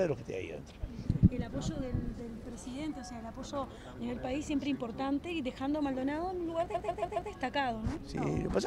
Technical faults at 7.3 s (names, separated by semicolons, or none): repeated frames